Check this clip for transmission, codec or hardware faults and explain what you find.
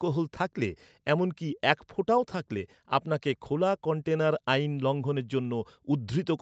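No transmission, codec or hardware faults are audible here.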